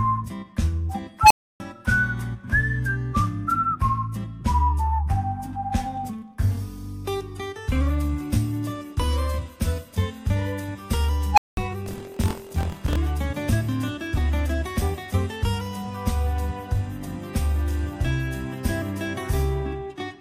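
At 1.22 s and again at 11.33 s, an unstable filter fires. A tone near 1 kHz, then one near 700 Hz, swells within 85 ms and 48 ms. Bad recursive coefficients make it run away and clip. Silence follows, about 0.3 s and 0.2 s.

From 11.84 s to 12.97 s comes buffer tearing. Writer and reader of a ring buffer have slipped. About a tenth of each period repeats sound roughly 50 ms old, with hard joins. A 43.1 Hz robotic buzz results, which fits a 1024-sample buffer.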